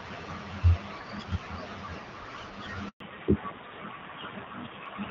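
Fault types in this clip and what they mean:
Handover gap: At about 2.88 s the call gets passed from one network to another, and for roughly 120 ms nothing comes through while the new link sets itself up. You hear the speech die away quickly into a short, dead silence that runs to about 3.00 s. It isn't a pause in the talking but a real hole, so whatever was said in that slice is simply gone.
Fallback to narrowband: Right after the gap, from about 3.00 s to the end, the call no longer sounds like HD Voice. Up to the switch the wideband coding is clear, with just light coding damage. After it, everything above 4 kHz is cut off, so the speech goes duller and more boxed-in and picks up a rougher, grainier edge. That sound points to an older narrowband codec running at a low rate, something like AMR-NB at 7.4 kbit/s.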